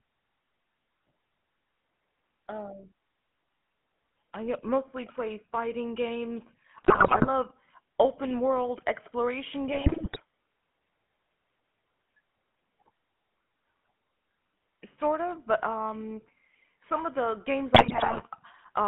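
GSM full-rate codec coding runs throughout: the speech is rebuilt from a vocal-tract filter driven by a sparse, regularly spaced pulse excitation, giving a plainly audible buzzy, gravelly roughness that fits the 13 kbps full-rate coder, with the band confined to about 150 Hz to 3.4 kHz.

GSM bit errors strike at 6.78 to 7.29 s, 9.72 to 10.21 s and 17.74 to 18.23 s. Corrupted filter, pitch and gain parameters bend the spectrum and jolt the level frame by frame, so the speech breaks into squawks, pops and gargling for about half a second each time.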